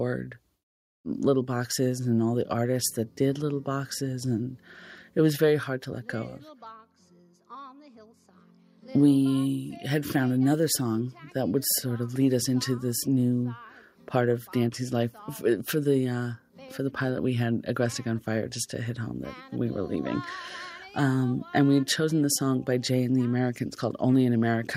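No technical faults can be heard anywhere in the audio.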